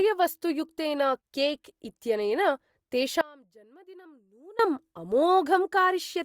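Speech that abruptly cuts out from 3.21 to 4.59 s, leaving only a faint trace roughly 25 dB down: an audio dropout to a faint residue, likely a signal loss with the path still live.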